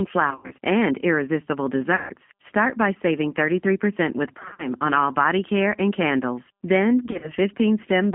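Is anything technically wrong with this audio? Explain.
Yes. The whole speech clip runs through the G.729 codec at 8 kbit/s, with the line band limited to about 150 Hz to 3.4 kHz. Each 10 ms frame gets rebuilt from a vocal tract filter, a pitch predictor and a few pulses, so the voice comes across noticeably rough, thin and a bit synthetic.

On top of that there's VoIP packet loss concealed by the speech codec, four times: 0.31 to 0.53 s (just before "and irresistible"), 1.96 to 2.11 s (right after "and irresistible"), 4.39 to 4.69 s (just before "on all body care"), and 7.06 to 7.32 s. Each stretch loses 100 to 150 ms of frames, and the decoder fills the gaps by stretching its last pitch and filter at falling gain. You hear buzzy, smeared bits that fade out, and the voice stays weak for a moment afterwards.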